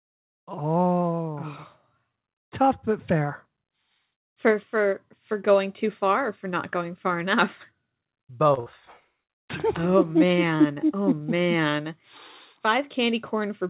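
A short stall from a late packet comes first, at 8.54 to 8.60 s. One packet reached the receiver late and the jitter buffer emptied, so the last speech sound was stretched for about 30 ms and playback then carried on without losing anything. The result is a briefly held sound with a slight buzz or dip.

A burst of packet loss follows immediately, from 8.60 to 8.69 s. Consecutive audio failed to arrive in time, so the receiver continued the previous sound for 58 ms and lowered it as the gap went on. When the speech resumes, about 60 ms is missing, heard as a held sound fading out followed by a small jump forward. The call path's narrowband coding, with nothing above 4 kHz, fits G.711 mu-law.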